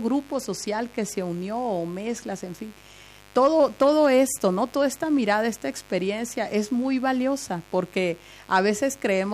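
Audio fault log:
Throughout, mains buzz: a steady, raspy buzz sits under the speech for the whole clip, roughly 30 dB below it. Sharp switching spikes repeat twice per 50 Hz cycle, so energy lands on a dense comb of 50 Hz harmonics reaching well up into the kilohertz range. That spread of harmonics is what separates it from plain hum, which is a smooth low tone at 50 or 100 Hz with little above, rather than an edgy, buzzing rasp.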